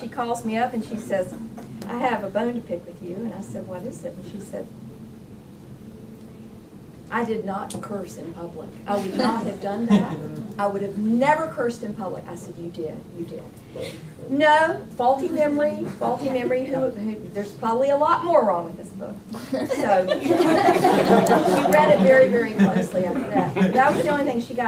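No faults detected; the audio runs without audible problems.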